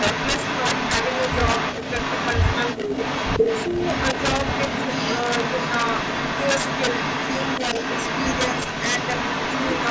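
Throughout the clip, a gain or summing stage overdrives the speech by 7 dB and, instead of limiting, lets the values run past the integer ceiling, so they wrap to the opposite sign. This is integer overflow. On roughly one percent of samples, the loudest peaks flip across the whole range, and each one is heard as a violent crack on loud syllables, harsher and more abrupt than ordinary clipping.

From 0.0 to 7.59 s, the far end's echo canceller is likely failing to remove what its microphone picks up from its loudspeaker, so that audio is sent back as an echo leak. A copy of the speech trails the original by 359 ms, roughly as loud as the direct sound itself, giving a doubled quality.

At 2.77 to 2.9 s, 3.69 to 3.74 s and 7.59 to 7.79 s, the canceller likely cannot tell the local talker from loudspeaker echo while both are active, and turns everything down. This speech suppression in double talk makes the speech dip briefly, by roughly 10 dB in the first instance and roughly 5 dB in the other two, lasting about 150 ms, 50 ms and 100 ms in turn.

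From 7.79 s to the end, the echo leak returns with the same 359 ms delay, now a little quieter than the speech. The call microphone processing's band limit, with nothing above 8 kHz, is not a fault.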